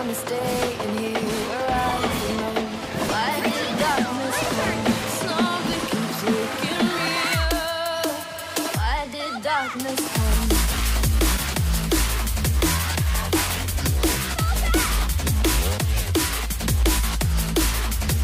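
Nothing here calls for comment, since there isn't a single technical fault to point to anywhere in the recording.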